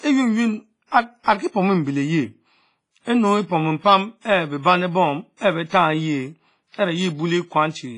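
Across the whole speech clip the sound rings and washes, with a hiss that swells and fades with the signal and nothing above 10.6 kHz. This is likely WMA compression at a low bitrate, around 24 kbps, where heavy quantisation spreads noise across long blocks and zeroes weak detail.

Pre-echo appears from 0.87 to 0.92 s, 5.37 to 5.41 s and 5.69 to 5.72 s. Each time, a brief hiss of 34 to 53 ms creeps in just before a sharp attack, which then sounds softened. The codec spread its noise evenly across a block where the attack landed late.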